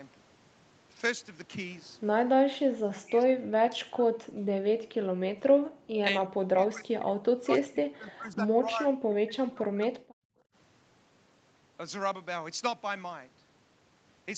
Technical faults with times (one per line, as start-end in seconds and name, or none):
3.05-4.56 speech suppressed in double talk
4.84-5.19 background gated by the echo canceller
5.51-5.98 background gated by the echo canceller
6.26-10.29 speech suppressed in double talk